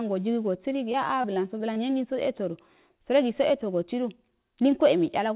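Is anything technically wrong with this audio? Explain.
Yes. From about 0.92 to 1.78 s there's repeated packet loss (robotic sound): five short holes, the longest around 22 ms. Each gets patched by stretching the last bit of sound, so this stretch comes out choppy, with pieces missing. The bandwidth stops at 4 kHz, which fits a G.711 mu-law call at 64 kbps.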